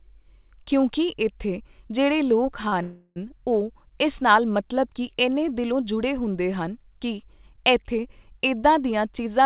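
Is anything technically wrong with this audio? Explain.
Yes. There are two timing faults close together in this speech.

From 2.68 to 2.74 s there is a short stall from a late packet. The jitter buffer ran dry, so the last sound is held about 38 ms. It has a slight buzz or dip.

From 2.82 to 3.18 s there is a call audio freeze, likely from packets held up in transit. The receiver extends the sound for 341 ms as a fading buzz or hiss. It then resumes where it stopped.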